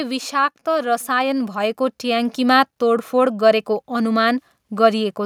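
A speech recording with automatic gain rising from 0.72 to 2.41 s: the gain control, judging the input too quiet, lifts level by about 7 dB, so voice and background noise swell together. The waveform envelope and the spectrogram's noise floor both climb steadily across that span.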